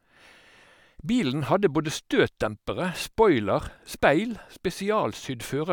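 No technical faults can be heard anywhere in the recording.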